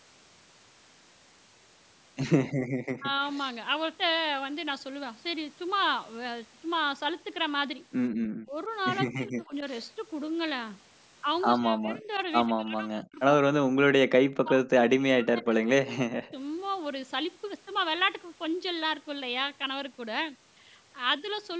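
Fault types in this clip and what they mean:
Background gated by the echo canceller: while the far-end loudspeaker played, the canceller clamped the microphone and the room tone vanished, at 2.52 to 2.70 s with a drop of about 36 dB and briefly at 8.11 to 8.15 s, about 35 dB. On a waveform the noise floor collapses to a near-flat line. A spectrogram shows a clean vertical gap across all frequencies that refills once the canceller releases.
Speech suppressed in double talk: the talker's own voice dips or breaks up in pieces, most likely because both sides spoke at once and the canceller treated the voice as echo. It happens at 2.98, 8.43, 9.08, 11.59, 12.47 to 15.52 and 15.97 s. The long stretch loses around two seconds in total and drops by roughly 40 dB, while the others drop by roughly 15 to 35 dB. The waveform shows chopped, hollowed envelopes, and the spectrogram shows harmonics fading or clipped out in patches.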